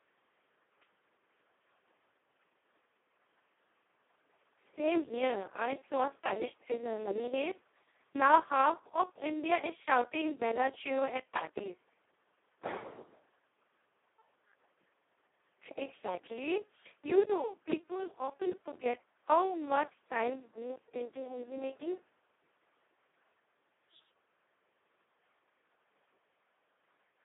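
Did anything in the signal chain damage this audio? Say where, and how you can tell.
Yes. The speech sounds hoarse, buzzy and close to robotic throughout, squeezed into a band of roughly 300 Hz to 3.6 kHz with nothing above 3.8 kHz. That points to the codec stage: heavy Speex codec damage, consistent with a setting near the bottom of its range, around 2 kbps. At that rate the CELP encoder has almost no bits for the excitation, so the voice is rebuilt from a crude, nearly vocoder-like source.

The second fault sits at the driver or buffer stage. Small ticks recur at a steady interval of 1.02 s, about thirty of them between 0.34 s and 26.92 s, and they are audible only while there is signal. Each is a tiny splice where roughly a millisecond of audio was skipped outright, not filled with silence. This is the signature of periodic USB or driver dropouts, where a background task stalls the bus or audio driver on a fixed cycle.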